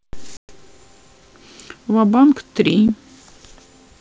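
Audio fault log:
0.37–0.51 s and 2.88 s, packet loss on an ADPCM call: a 120 ms run of packets, then one 10 ms packet, were lost and filled with silence, leaving hard-edged gaps. The decoder's predictor and step size fell out of step with the sender's, so the speech resumes with brief distortion.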